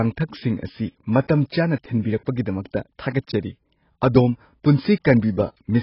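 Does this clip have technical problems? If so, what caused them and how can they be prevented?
Yes. The speech carries AAC compression damage from start to finish, and it's heavy. Nothing comes through above about 5.5 kHz, so the voice sounds dull and boxed-in, and sibilants turn smeary and fizzy with a warble. That points to AAC-LC at a very low bitrate, something like 16 kbps. At that rate the encoder likely drops the top band entirely and spends its few bits coarsely on the rest. To prevent it, encode at 64 kbps or more for speech, or keep a lossless master.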